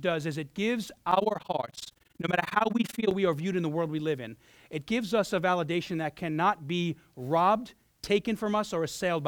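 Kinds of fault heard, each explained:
Overlap-add ripple: The speech was cut into windowed frames and rejoined with overlaps that do not sum to a steady gain. From 1.12 to 3.14 s, the level dips by about 60 dB roughly 20 times a second. This gives a harsh, fast flutter.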